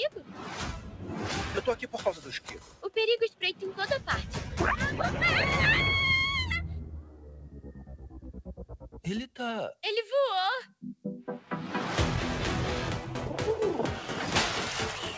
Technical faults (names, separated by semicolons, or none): noise suppressor applied to music or sounds; sound cut by the noise suppressor